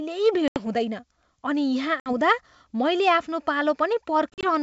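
Packet loss on an ADPCM call hits this speech three times. At 0.48 to 0.66 s, 80 ms of audio drops out. At 2.00 to 2.11 s, 60 ms goes. At 4.30 to 4.46 s, 80 ms is lost in scattered gaps over 130 ms, the longest 40 ms. Each loss leaves a hard-edged silent hole. The decoder's predictor and step size then disagree with the sender's. Speech resumes slightly distorted, settling within tens of milliseconds.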